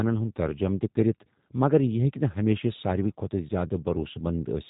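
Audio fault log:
Throughout, G.729 codec: the speech has that plainly audible rough, slightly synthetic edge, and there's nothing above 3.8 kHz, so it sounds boxed in and dull. The codec throws away the waveform and rebuilds it from a vocal tract filter, a pitch predictor and a few sparse pulses per short frame, which is where the buzzy, processed texture comes from. The character fits an 8 kbit/s stream, most likely the G.729A variant.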